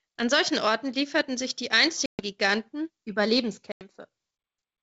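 At 2.06 s and 3.72 s, packet loss on an ADPCM call cuts hard-edged silences of 130 and 90 ms; the desynchronised decoder then resumes slightly distorted before settling.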